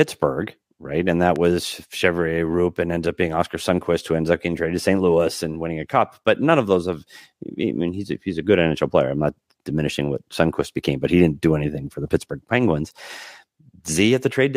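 At 1.36 s a single loud pop cuts through the speech and is gone by 1.38 s. It is a short, sharp click-thump that rises a little above the level of the voice. The speech carries on underneath without a break. A sudden voltage step entered the signal path here, likely from a plug being seated, a switch, or static discharge. The following circuitry shaped that step into this brief pulse.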